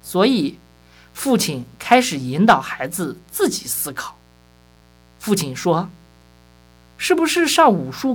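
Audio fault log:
Throughout: mains buzz. A steady, raspy buzz sits under the speech for the whole clip, locked to 60 Hz mains. Sharp switching spikes twice per cycle leak in through something like a dimmer, rectifier or poor shielding. Those spikes carry harmonics of 60 Hz well up into the kilohertz range. That is why it rasps rather than hums. It stays at a low level, about 35 dB below the speech.
4.74 to 4.85 s: repeated frames. A short slice of the speech plays again, giving a quick stutter. A block of about 52 ms, two compressed frames long, was sent or written out twice more. The decoder simply played the same audio again each time. The clip runs about 105 ms longer as a result.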